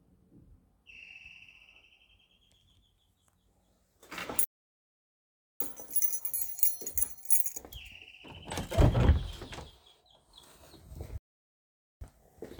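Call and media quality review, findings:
Playback stall, 4.44–5.60 s: everyday sound cuts to full silence mid-flow for about 1.16 s, then resumes. Likely player-side buffer underrun or blocked audio thread; output starved until data refilled.

Playback stall, 11.18–12.01 s: same symptom, silence for about 0.83 s before sound returns. Likely the same starvation in the playback path; the dropout sits inside the stream rather than at its end.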